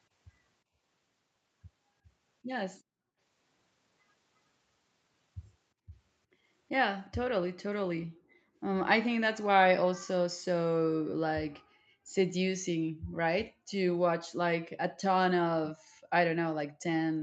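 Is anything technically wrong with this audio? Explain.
Yes. Background gated by the echo canceller: at 0.64–0.75, 2.83–3.18, 5.74–6.48, 8.07–8.45, 11.63–13.7 and 15.78–16.82 s, the canceller clamped the microphone while far-end audio played. The room sound behind the speech dips or vanishes, by about 15 dB at first, about 24 dB at 5.74 s, and up to about 40 dB elsewhere, then returns.

Echo leak: at 7.05–7.1 s, a faint delayed copy of the speech slips through, 358 ms late and about 35 dB below the main signal. It is likely a loudspeaker-side echo canceller failing to remove everything its microphone picked up. Nothing above 8 kHz comes through, as the call's microphone processing band-limits the audio.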